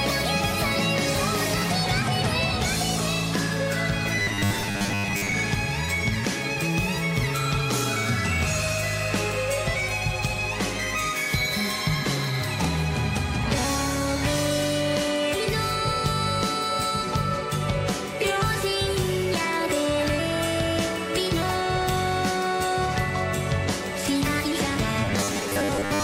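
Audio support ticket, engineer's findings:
Rigid metallic buzz locked at 100 Hz, 4.17–5.32 s and 25.05–26.03 s. Robotic sound from repeated short buffers, likely from late-arriving audio: the last 10 ms is looped to fill gaps, skipping most material in the first event and about half in the second.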